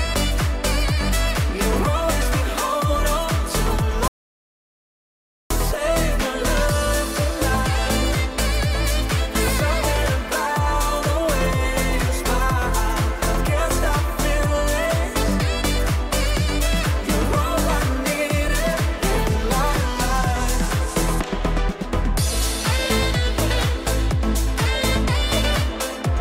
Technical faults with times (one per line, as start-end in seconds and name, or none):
4.08-5.50 audio dropout to silence